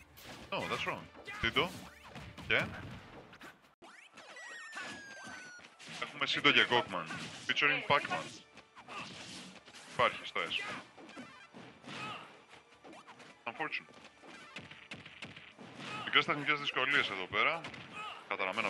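At 3.74 s, an 80 ms gap, then sound capped at 11.4 kHz with faint new noise: likely an input switched to a poorer device.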